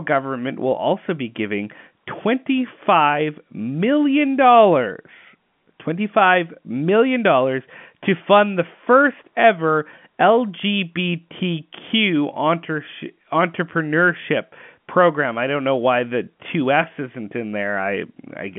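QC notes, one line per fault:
Nothing to flag here, just ordinary G.711 telephone coding doing its job, with the sound sitting in the usual line band of 150 Hz to 3.4 kHz and nothing above 3.6 kHz.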